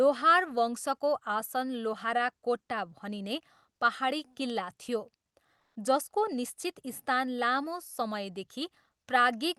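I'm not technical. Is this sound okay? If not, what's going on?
No. From 5.59 to 5.75 s the real background drops out and is replaced by comfort noise, a flat hiss that's likely the call system filling a quiet pause.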